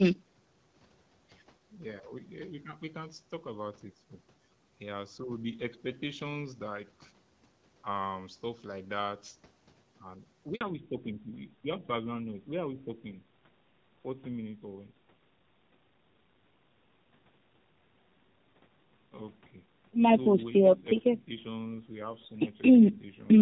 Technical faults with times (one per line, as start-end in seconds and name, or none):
10.55-10.61 handover gap
10.61-23.42 fallback to narrowband